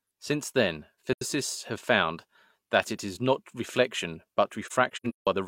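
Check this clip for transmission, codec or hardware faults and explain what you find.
Two dropouts are audible, both of the same kind.

AAC frame loss with muting: the speech fades into soft-edged silence and back, from 1.13 to 1.22 s, about 85 ms, just before "have found that it", and again after "it is not reflection", where gaps totalling about 341 ms are scattered between 4.66 and 5.27 s, the longest around 150 ms. The decoder zeroed the spectrum of missing frames, consistent with roughly two lost frames in the first hole and eight in the second, and its overlapping windows smoothed each edge into a fade.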